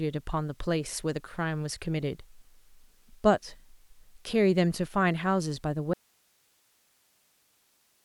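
A speech recording that suffers an audio dropout to a faint residue from 5.94 s to the end: the signal cuts off abruptly, leaving only hiss roughly 40 dB down, likely from a broken connection upstream while the input stayed live. The waveform collapses to a thin flat band, and the spectrogram turns to even, low-level broadband noise.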